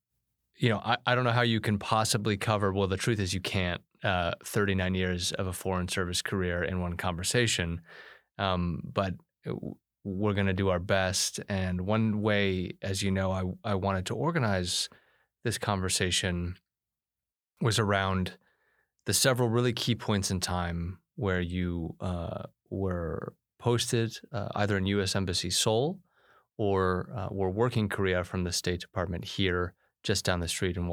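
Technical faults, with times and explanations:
17.32–17.57 s, digital wireless dropout: the speech falls into a clean 250 ms hole of near silence, with no noise burst at either edge, just before "was around". The receiver lost too much of the digital link's data and muted itself with a very short fade.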